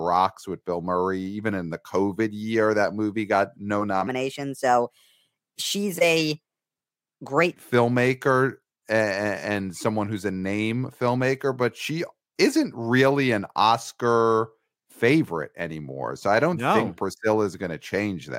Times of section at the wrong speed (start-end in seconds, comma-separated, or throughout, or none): 4.07-7.54